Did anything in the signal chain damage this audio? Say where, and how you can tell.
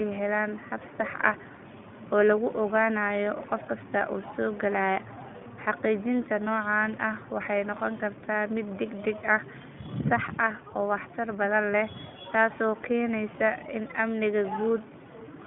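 Yes, at the codec stage, across the whole speech clip. This is iLBC coding. Nothing reaches above about 3.7 kHz, and the line band sits roughly between 150 Hz and 3.5 kHz. On a spectrogram the energy stops at a hard ceiling, with a thin low end. The plainly audible roughness and synthetic texture come from excitation coded frame by frame without reference to the previous frame. That fits 20 ms frames at the 15.2 kbps mode.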